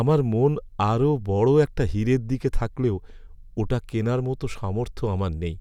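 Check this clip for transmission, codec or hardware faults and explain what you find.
Nothing here points to a transmission, codec or hardware problem; the speech comes through with nothing that needs explaining.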